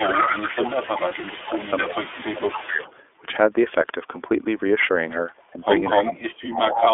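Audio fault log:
throughout: iLBC codec. The sound is band-limited to about 300 Hz to 3.5 kHz, with a rough, slightly synthetic edge from coding in 30 ms frames at 13.33 kbps.
0.00–2.94, 5.36–5.44, 5.94–6.12, 6.73–6.80 s: echo leak. A copy arrives 255 ms late, mostly about 10 dB down, fainter at 5.36 s. An incompletely cancelled loudspeaker echo is the likely cause.
0.03–2.85, 6.01–6.94 s: speech suppressed in double talk. The level dips, roughly 15 dB early and up to about 35 dB near the end. Likely the echo canceller ducking during overlapping talk.
1.08–1.14 s: lost iLBC frames. One 30 ms frame is missing, filled with a brief buzzy held sound, and recovery is almost immediate.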